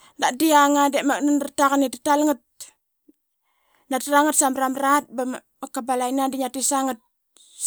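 No technical faults can be heard.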